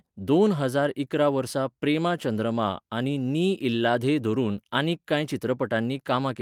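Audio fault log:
No faults are heard in this speech recording. There is nothing here to log.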